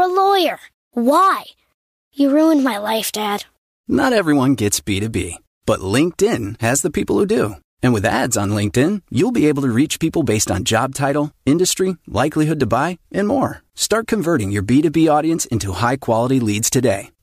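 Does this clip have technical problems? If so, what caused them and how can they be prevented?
No, there's nothing wrong with this speech clip from a technical standpoint, so there's nothing here that needs preventing.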